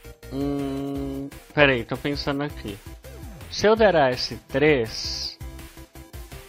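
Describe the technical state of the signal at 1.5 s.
Damaged data in a compressed stream occurs from 1.50 to 1.52 s. For about 20 ms, the bytes the decoder receives no longer form valid frames, so it misreads or discards what it finds there and loses its place in the stream. Until it locks back onto the next intact frame header, the output is a short, harsh chirp or blip breaking into the audio.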